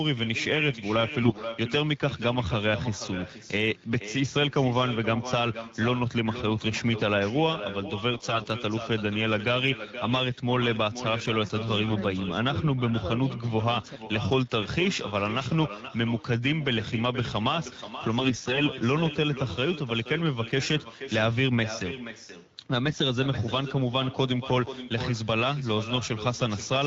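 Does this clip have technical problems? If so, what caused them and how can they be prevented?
Yes. Throughout the speech there is echo with no canceller: every phrase returns about half a second later as a quieter, thinner copy, roughly 12 dB below the direct speech. The far end is playing the call through a loudspeaker, and its microphone sends that sound back across the network. Unlike room reverberation, which smears continuously, this is a distinct delayed repeat that follows the speech's own rhythm. An acoustic echo canceller at the far end, or a headset there, prevents it.

There are also AMR bit errors at 1.22 to 1.42 s, 8.11 to 8.46 s, 11.84 to 11.94 s, 18.19 to 18.63 s and 22.88 to 23.02 s. In each burst the speech keeps roughly its pitch and loudness but turns hoarse, scratchy and gargly. This points to a weak radio link flipping a few percent of the less protected bits in each frame. 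The decoder still accepted the frames, so it placed its excitation pulses wrongly and misread the finer pitch, gain and spectral values. Dropped packets would instead leave gaps or smoothed-over concealment, not this grainy texture. The wideband AMR-WB codec carrying the call stays clear outside these bursts. Better coverage or stronger channel protection, such as a more robust codec mode on poor links, prevents the errors.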